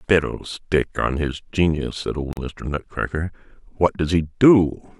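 A speech clip with one gap at a join of encoded pieces, a silence of about 42 ms from 2.33 to 2.37 s. The pieces were evidently encoded separately and butted together untrimmed, so one run's padded last frame and the next run's start-up delay both remain. Unlike a dropout or packet loss, nothing is missing: the speech resumes exactly where it stopped, and the edges are smeared by the codec rather than clicking.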